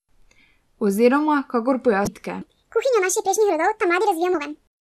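At 2.04 to 2.07 s there's a quick glitch from damaged data in the compressed stream. Bad data throws the decoder off, so it drops sync and hunts for the next frame header. The same glitch shows up again at 4.31 to 4.35 s.

From 2.41 s to the end, the speech runs at the wrong speed, 1.63 times faster, so it sounds rushed and chipmunky, roughly ten semitones up. It's likely that section was played back against the wrong clock.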